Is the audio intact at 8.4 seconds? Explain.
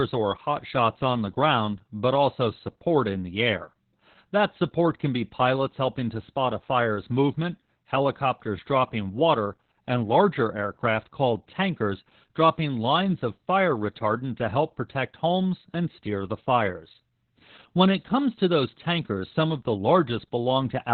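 No. Opus voice compression affects the whole clip, including 8.4 s. Nothing remains above 4.4 kHz, and the narrow band and coarse coding make the speech muffled, hoarse and robotic, which fits about 8 kbps.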